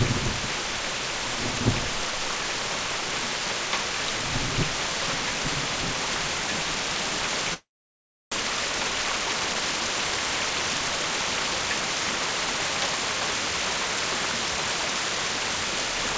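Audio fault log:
7.54 to 8.36 s, long network dropout: the sound trails off into a fading buzz, then near-silence; likely lost packets, and about 0.6 s never comes back.
8.43 to 9.62 s, jitter buffer speed-up: things run about 13% fast at unchanged pitch as the receiver trims tiny pitch-period chunks to catch up after that backlog.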